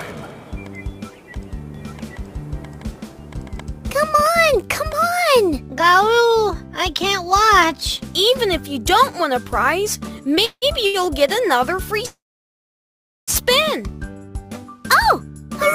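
From 1.74 to 4.20 s there's a doubled audio track: a second, equally loud copy trails roughly 0.7 s behind, starting and stopping abruptly, likely from a slower second capture path. Around 10.35 to 10.40 s a short stall from a late packet stretches the sound by 16 ms. A call audio freeze follows at 10.45 to 10.65 s, with a fading buzz or hiss and then about 70 ms of silence while the packets are held up, which likely emptied the jitter buffer. Another stall at 10.86 to 10.97 s holds a sound about 78 ms too long. The big freeze runs from 12.06 to 13.31 s, with about 1.1 s of silence before the audio picks up where it stopped.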